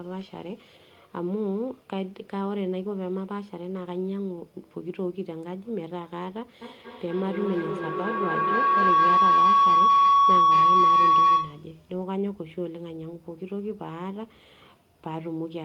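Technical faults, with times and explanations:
6.61–11.80 s, feedback howl: a tone creeps in around 1 kHz and keeps swelling until it peaks about 10 dB above the speech, pulsing roughly every fifth of a second. That's a mic-to-speaker loop with more gain than loss, so each trip round comes back louder and narrower, settling on whatever frequency the loop favours. The pulse rate reflects the loop's round-trip delay, and the howl stops only once the loop is broken.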